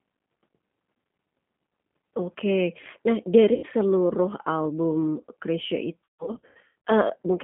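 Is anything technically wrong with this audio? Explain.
Yes. The whole clip has passed through the G.729 codec, and two stretches suffer VoIP packet loss concealed by the speech codec.

Throughout, the speech was rebuilt from a vocal tract filter, a pitch predictor and a few pulses per frame, which fits an 8 kbit/s G.729A stream. The band runs only from 150 Hz to 3.5 kHz, so the voice sounds thin, slightly rough and plainly synthetic.

Around 3.54 to 3.66 s, about 90 ms of audio went missing. The decoder extended its last pitch and filter with falling gain, so the sound smears into a short buzzy tone or coloured noise that fades. From 6.04 to 6.75 s the losses are heavier: about 480 ms missing, scattered across roughly 810 ms, with the longest gap 150 ms. This produces repeated fading stretches of buzz or coloured noise, and because each frame builds on the previous one, the speech stays weak or distorted for a while after each gap.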